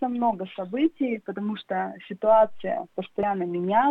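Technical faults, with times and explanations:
3.23 s, compressed frames skipped: the audio jumps forward by about a tenth of a second, which fits a single dropped frame of roughly 93 ms. The decoder played nothing for that frame, either because it was missing or because it was rejected as damaged. Unlike a dropout, there is no gap of silence.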